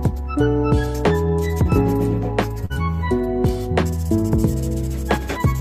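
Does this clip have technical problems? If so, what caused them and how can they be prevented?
Yes. At 2.65 to 2.72 s there is a short stall from a late packet: the jitter buffer ran dry, so the last sound was held for 44 ms, and playback resumed without loss. At 2.74 to 2.88 s a short concealed packet loss follows: 20 ms never arrived and was synthesised from the preceding sound, leaving a brief smear, with a slight extra delay added. A deeper adaptive jitter buffer and forward error correction on a less congested network path would prevent both.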